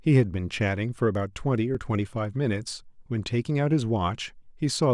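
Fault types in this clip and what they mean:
Dropped buffer (overrun): a jump at 1.75 s where a few milliseconds of speech are skipped with no silent gap, unlike an underrun; likely samples overwritten before being read.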